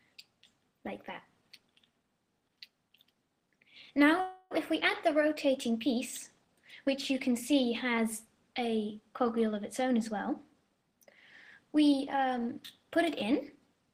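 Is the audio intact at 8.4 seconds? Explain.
Yes, the audio is intact at 8.4 seconds, with no dropout, click, distortion or other fault at that moment.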